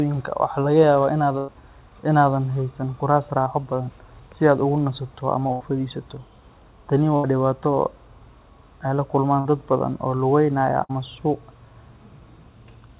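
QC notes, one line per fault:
1.38–1.50, 5.52–5.62, 7.16–7.26, 9.40–9.47, 10.83–10.91 s, burst of packet loss: five gaps of 60 to 100 ms. The first comes after "waxaa laga". The fourth falls between "ay la" and "dad badan oo lugaynaya". Each time, the receiver keeps the last sound going and fades it. It comes out as a held buzz or a dying hiss. Speech then picks up later, and the stretch in between is gone.
3.42–3.48 s, short concealed packet loss: about 40 ms failed to arrive in time. It sits between "aadan haysan kuraas" and "badan si". The decoder patched it by extending the preceding sound and then blending back into real audio. The result is a brief smear in the speech rather than a clear hole. Like the rest of this call path, it stays band-limited to 4 kHz by the G.711 codec.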